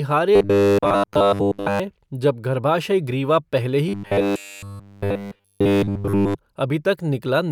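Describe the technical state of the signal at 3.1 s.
At 3.1 s the speech signal is intact, with no audible dropout, distortion, glitch or other technical fault at that moment.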